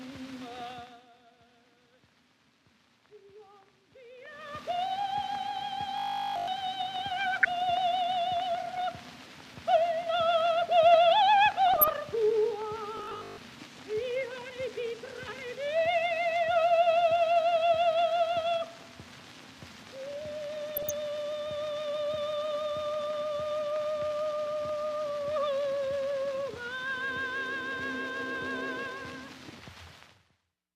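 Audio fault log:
5.98–6.48 s and 12.97–13.37 s, robotic sound from repeated short buffers: the sound turns into a rigid metallic buzz at 50 Hz, which fits one 20 ms stretch being replayed over and over, likely because audio arrived too late. The first event repeats throughout, and the second does so for most of its length.
7.33–7.46 s, 11.68–11.93 s and 20.71–20.91 s, DAB burbling: short blips of noise break over the sound. Weak reception leaves a small fraction of a percent of bits wrong after error correction, so wrong samples put blips of noise into single sub-bands.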